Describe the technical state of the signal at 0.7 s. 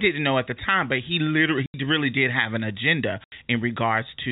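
At 0.7 s the speech is intact, with no fault, only the normal 4 kHz ceiling of G.711 telephone coding.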